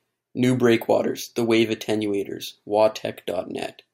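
Nothing stood out on listening to this speech recording.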